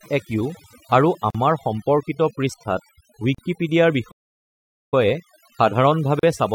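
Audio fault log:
throughout, overdone noise removal: background drops and breaks up into twinkling specks; bands near the noise estimate were cut too hard.
1.30–1.35 s, 3.35–3.38 s, 6.19–6.23 s, gap at a join of encoded pieces: brief holes of about 38–43 ms with smeared edges; untrimmed encoder delay and padding where roughly 2 s pieces meet.
4.11–4.94 s, playback stall: sound halts mid-flow for 0.81 s; likely the player ran short of data or was blocked.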